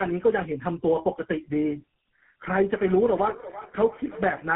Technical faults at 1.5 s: tandem speech coding

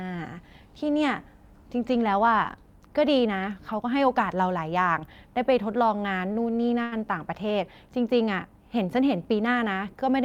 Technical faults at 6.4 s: short stall from a late packet

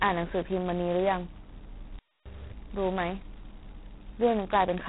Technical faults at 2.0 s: G.726 ADPCM; playback stall

